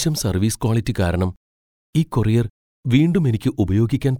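Nothing goes wrong in this bit of speech, so there's no fault to point to anywhere along the way.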